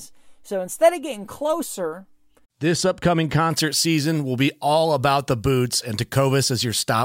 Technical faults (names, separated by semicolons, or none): pre-emphasis left on